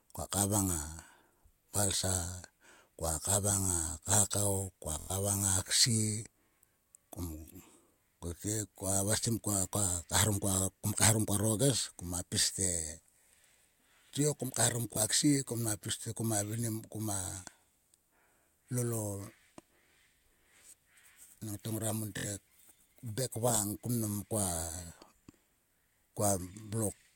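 Bluetooth stutter hits the speech at 5.0 to 5.1 s, at 14.93 to 14.97 s just after "kom kaeharom", and at 22.18 to 22.27 s after "ngora mon". Each time, packets arrived late or not at all, so the receiver replayed its last slice of about 23 ms. The first gap, 93 ms, fits four lost packets and sounds like a machine-gun buzz. The second is a single hiccup. The third, 70 ms, is a short rattle. Speech then resumes further on, as if it had kept playing.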